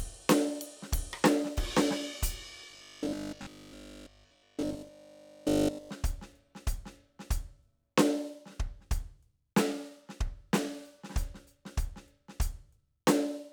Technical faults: robotic sound from repeated short buffers

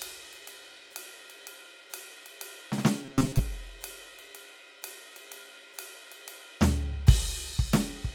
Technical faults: robotic sound from repeated short buffers

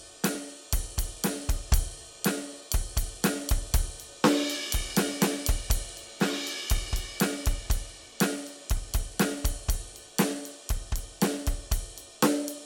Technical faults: dropped buffer (overrun)

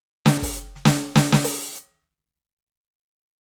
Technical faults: skip ahead

